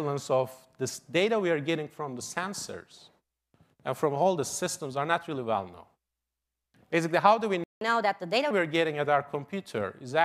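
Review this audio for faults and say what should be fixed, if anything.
At 7.64 s the speech cuts out for about 174 ms, a playback stall, resuming at 7.81 s. The likely cause is the player's buffer running dry or its output thread being blocked. Prevent it with a deeper playout buffer and an output thread that never waits on I/O.

From 7.81 to 8.51 s, catch-up at higher speed follows: the backlog is resampled to play at 1.25 times normal rate, raising the speech by roughly four semitones until it settles back. Prevent it by absorbing the lost time gradually or with pitch-preserving time-stretching.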